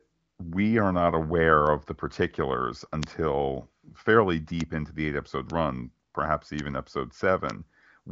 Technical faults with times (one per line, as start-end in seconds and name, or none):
3.03 bit error spike
4.61 bit error spike
5.50 bit error spike
6.59 bit error spike
7.50 bit error spike